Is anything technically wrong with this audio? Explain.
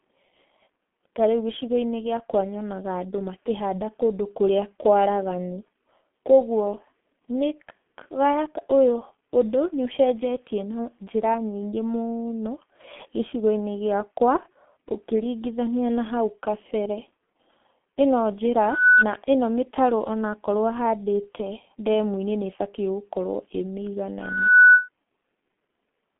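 Yes. Two faults can be heard.

Throughout, the speech carries heavy G.723.1 codec damage. The band runs from about 200 Hz to 3.4 kHz, with nothing above 3.7 kHz. The codec works in 30 ms frames and models the voice coarsely, so fine detail is lost. The sound fits a rate near 6 kbit/s. The voice comes out muffled and hoarse. Consonants are smeared.

There is a loudspeaker feedback squeal at 18.62 to 19.05 s and at 24.20 to 24.89 s. A microphone is picking up the loudspeaker it feeds. At 1.5 kHz the loop gain exceeds one, so that tone feeds itself and grows. Each squeal swells over a fraction of a second. It peaks at roughly 10 dB above the speech as a single piercing tone.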